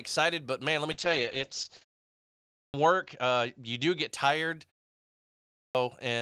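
At 0.93 s, just after "man let me", the call's bandwidth estimate fell and the encoder was pushed from 32 kbps down to 8 kbps. This is a call bitrate drop. It held at its lowest for about 1.07 s, and the coded bandwidth narrowed from 20 kHz to 8 kHz. The speech loses its top end and turns muffled and coarse, with a rough, watery grain. It recovers by 4.15 s.

At 2.19 s, after a 0.43 s pause, the output device had dropped into sleep and needed time to wake. This is a clipped start after a pause. About 0.55 s of the returning speech is swallowed until 2.74 s, so it begins abruptly out of silence without its opening sounds. The same thing happens at 5.1 s after a 0.47 s pause, where about 0.65 s is lost until 5.75 s.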